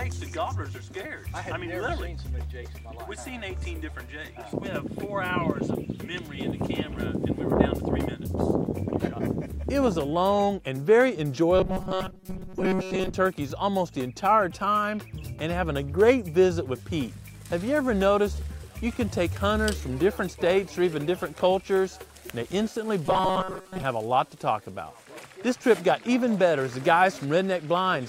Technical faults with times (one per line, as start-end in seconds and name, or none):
11.58-13.15 robotic sound from repeated short buffers
23.06-23.83 robotic sound from repeated short buffers